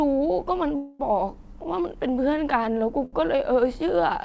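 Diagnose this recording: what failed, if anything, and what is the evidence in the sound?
A call audio freeze runs from 0.76 to 1.01 s in this speech. The last sound is carried on as a fading buzz or hiss for about a quarter of a second, then the audio resumes exactly where it left off, with nothing lost, only delayed. That points to the network and jitter buffer stage: packets were likely held up in transit, the buffer drained, and the receiver filled the wait with a synthesised continuation, adding 235 ms of latency.

A short stall from a late packet follows from 3.05 to 3.15 s. A sound is held slightly too long, with a faint buzzy dip, for 71 ms before the audio carries on with nothing missing. Again this is the jitter buffer: one packet missed its playout time, so the receiver stretched the previous audio until it arrived. The G.722 call path, with no content above 8 kHz, carries the whole recording.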